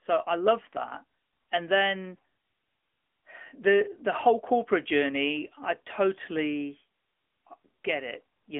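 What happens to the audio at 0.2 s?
At 0.2 s the speech is already going through the AMR narrowband mobile codec, which runs the whole clip. The band sits around 250 Hz to 3.4 kHz, and the plainly audible buzzy, synthetic colouring fits a bitrate around 10.2 kbps.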